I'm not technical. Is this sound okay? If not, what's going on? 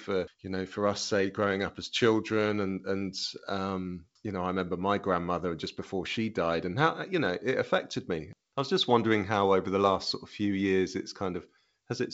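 Yes, nothing is wrong with this speech. It has the clear, slightly phone-like sound of G.722 wideband telephone coding, with its faint traces only as much as that kind of call normally carries.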